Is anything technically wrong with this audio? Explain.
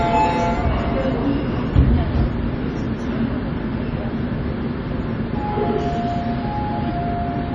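Yes. MP3 compression throughout: the treble stops dead near 10.1 kHz and weak detail flickers between frames, giving a watery, swirly sound with smeared attacks, likely from a low bitrate around 32 kbps.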